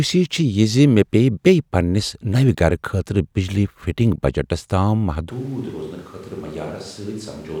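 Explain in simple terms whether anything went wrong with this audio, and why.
Something goes wrong at 5.3 s, and it lasts to the end. The speech suddenly sounds hollow, roomy and thinner, noticeably quieter, with more background noise. This is most likely a switch to a distant microphone, replacing the close one that was picking up the voice.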